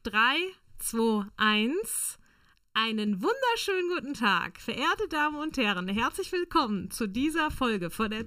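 From start to end, channel delay (comb filtering) makes the sound hollow. One channel lags about 0.7 ms, leaving fixed notches from around 700 Hz upward that, unlike a flanger's, never sweep.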